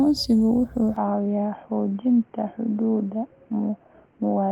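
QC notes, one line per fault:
0.96–4.52 s, input switched to a poorer device: speech abruptly loses everything above 3.2 kHz, with no gap or level jump, and a faint new noise floor appears, unlike plain filtering. Likely a microphone change.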